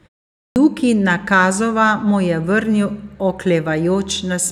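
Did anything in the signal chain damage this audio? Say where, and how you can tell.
Yes. There is a clipped start after a pause at the playback stage, where the output device sleeps through silence and needs time to wake. After the opening 0.42 s of quiet, the first speech is swallowed until 0.56 s, losing about 140 ms, so the speech begins abruptly without its initial sounds. On a waveform the signal jumps from flat silence straight to mid-syllable amplitude with no onset ramp. On a spectrogram, energy appears as a hard vertical edge with its first sounds missing.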